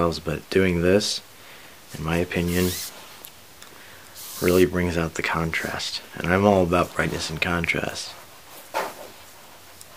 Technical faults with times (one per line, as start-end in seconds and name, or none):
none